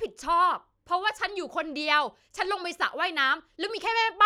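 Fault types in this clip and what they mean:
No fault types can be heard in this clip.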